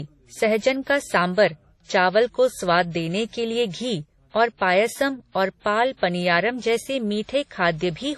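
Transcoding between lossy codecs runs throughout this speech clip: nothing sounds above 13 kHz, and two kinds of coding artefact are heard together. The likely cause is a low-bitrate WMA encode re-encoded as MP3, with the second coder wasting bits on the first one's damage.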